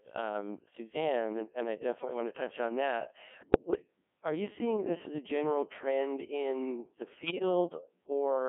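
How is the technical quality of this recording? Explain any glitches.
Quality's pretty rough: the whole clip is speech run through a very low-rate digital voice codec, and there are two short bursts where it breaks down.

Codec 2 vocoder, throughout: The decoder doesn't keep the waveform. It rebuilds the voice from sine waves using only pitch, voicing, energy and a spectral envelope, which is why everything sounds buzzy and robotic. The damage here is heavy, and the sound points to roughly 1.6 kbit/s. The band sits between about 200 Hz and 3.4 kHz, so it's thin as well.

Bit errors on digital voice radio, at 3.40 to 3.81 s and 7.16 to 7.42 s: The first burst falls right after "to touch on that" and before "are you seeing this". The second comes just after "general trend in the". Flipped bits land in a codec where each bit steers the pitch, level or tone of a whole frame, so the voice lurches into warbly, bleepy gibberish. 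The first burst sounds like roughly nine frames hit at an error rate of around 7%, and the second like about five frames at around 3%.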